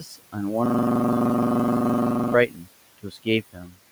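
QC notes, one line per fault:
Throughout: noise suppressor artifacts. The suppressor pulls down about 18 dB in every band it judges to be steady noise, recalculating frame by frame. The room noise, sitting about 19 dB below the speech, drops away in the gaps and comes back up under the voice, so the background pumps in step with the talking.
0.00–0.37 s, 2.47–2.69 s and 2.98–3.79 s: speech cut by the noise suppressor. In each stretch the suppressor mistakes quieter parts of the speech for background and attenuates them along with the noise. The deepest drops are about 18 dB, about 16 dB and about 19 dB respectively. Roughly a fifth of a second is affected in each of the first two spans and about half a second in the last. Soft consonants and trailing syllables there sound swallowed or fade out.
0.66–2.34 s: system hang loop. The system stalls while the audio hardware keeps replaying its ring buffer. 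The result is a single 42.67 ms slice of sound repeated exactly, 39 times over, at a rate of 23.4 Hz, which fits a 1024-sample buffer. It lasts about 1.7 seconds before normal playback resumes.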